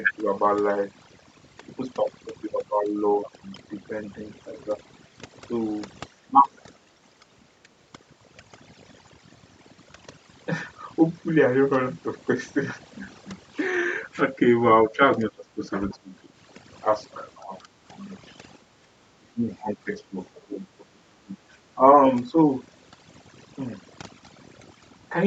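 Throughout, the background sits at near silence dotted with twinkling specks, and the voice has its quieter detail stripped away. This is overdone noise removal: noise reduction set so strong that it pushes individual frequency bands far down whenever they approach its noise estimate, taking soft parts of the speech with them.

At 6.31 s the voice dips briefly by about 5 dB. From 14.87 to 15.63 s it is cut down by about 20 dB. These are speech suppressed in double talk, likely an echo canceller that turned everything down because it could not separate the talker from loudspeaker echo.

At 15.9 s a faint scrap of a second voice slips in, about 30 dB below the talker. This is the other side's voice leaking through, likely residual loudspeaker echo the canceller failed to remove from the microphone.

The suppression returns at 15.94 s, with a drop of about 20 dB lasting until 16.15 s. A shallow dip of about 5 dB follows at 17.42 s. 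From 19.2 to 21.37 s the voice is turned down by about 20 dB, adding up to roughly a second. A final short 5 dB dip comes at 22.31 s.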